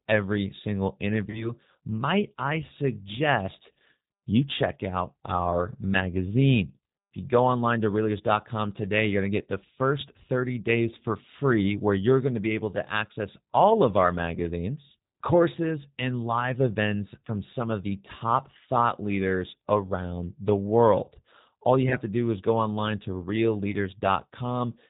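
G.729 coding runs through the entire speech recording, and its damage is plainly audible. The sound fits the G.729A variant at 8 kbit/s, which rebuilds each 10 ms frame from a vocal tract filter, a pitch predictor and a handful of pulses rather than the original waveform. Nothing above 4 kHz survives, so the voice is band-limited and slightly rough and synthetic, though it stays intelligible.

VoIP packet loss concealed by the speech codec occurs at 1.30 to 1.52 s, 21.89 to 21.97 s and 23.71 to 23.76 s. The first dropout fits about 30 ms of missing audio, the other two about 20 ms each. The decoder fills each gap by extending its last pitch and filter at falling gain, producing a brief smeared sound, a buzzy tone or coloured noise that fades. Because each frame builds on the previous one, the voice stays weak for a moment after audio resumes.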